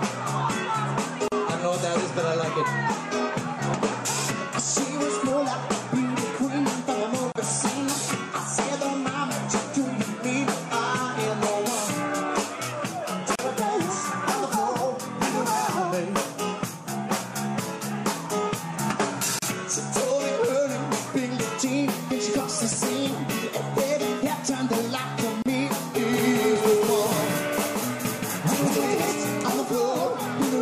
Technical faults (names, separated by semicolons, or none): gap at a join of encoded pieces; doubled audio track